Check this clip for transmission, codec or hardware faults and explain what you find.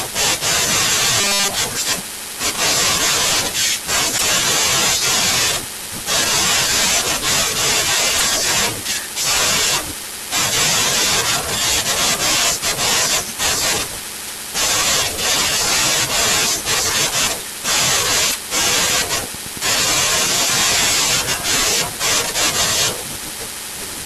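Three kinds of fault are audible in this speech clip: a robotic stretch, three decoder glitches, and a train of clicks.

Robotic sound from repeated short buffers occurs from 1.21 to 1.52 s. New audio arrives too slowly, likely because the playback buffer is being starved, and the player keeps recycling its most recent fragment while the real audio is dropped. Around two thirds of that stretch is repetition. The repeat rate imposes a fixed 200 Hz buzz, which fits fragments about 5 ms long, so the voice turns into a flat, metallic drone.

Damaged data in a compressed stream appears at 4.14 to 4.23 s, 8.14 to 8.23 s and 18.27 to 18.35 s. In each case part of the encoded stream is corrupt, so the decoder cannot parse the frames there. It loses its place and hunts for the next valid frame header. Each event is a brief glitch of under a tenth of a second.

A train of clicks runs from 18.67 to 21.63 s, about 30 pulses arriving at a steady 8.8 per second. 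Electrical interference or a struggling interface is the probable source, injecting near-identical spikes at a regular rate. The clicks peak at about the same level as the speech, so they are heard as a regular ticking over the voice and in the gaps between phrases.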